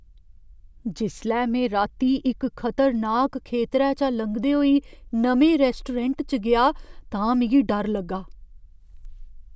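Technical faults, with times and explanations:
Nothing technical stands out in this speech recording; there are no faults to list.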